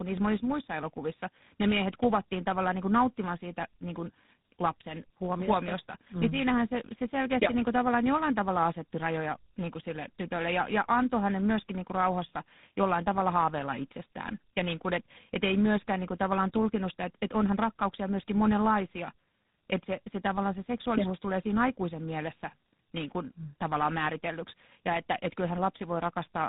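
From start to finish the speech sounds rough, muffled and warbly, with nothing above about 3.8 kHz. That is tandem speech coding: the call passed through two speech codecs in a row, decoded and re-encoded at each border. The second coder works on the first one's already damaged output, so their artefacts stack. The sound fits a G.726 stage at 24 kbit/s feeding, via an A-law link, a GSM full-rate coder.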